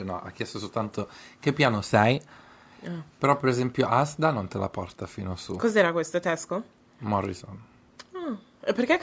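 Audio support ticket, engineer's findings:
No faults found in the speech; call microphone processing working as expected, high-pass filter removing the lowest bass and no content above 8 kHz.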